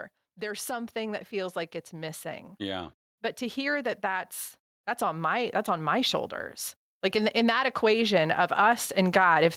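From 0.35 to 4.34 s, and again from 7.12 s to the end, automatic gain rising: the gain control judged the input too quiet and lifted it, by about 7 dB in the first swell. Background noise grows along with the speech, unlike a talker moving closer.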